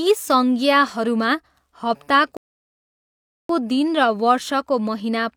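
A rebuffering stall runs from 2.37 to 3.49 s: the player exhausted its downloaded audio and paused for fresh data. The speech drops to silence for about 1.1 s, then picks up exactly where it stopped, with nothing missing, only time added.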